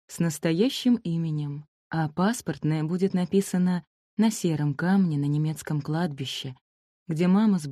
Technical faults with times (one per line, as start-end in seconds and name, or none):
none